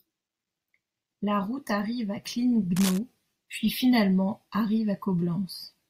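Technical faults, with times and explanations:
2.76–2.99 s, cable scratch noise: dense, uneven scratching rides over the speech, about 10 dB quieter than it. Likely a worn cable or connector moving, its contact resistance jumping.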